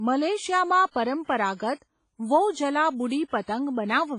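WMA compression runs throughout: the speech sounds washy and ringing, with breathing hiss and nothing above 10.5 kHz, likely a heavy WMA encode around 24 kbps. Pre-echo at 0.91 s and 3.28 s puts hiss 51 ms and 58 ms before sharp attacks, which sound smeared, because block-wide quantisation noise fills the quiet before each attack.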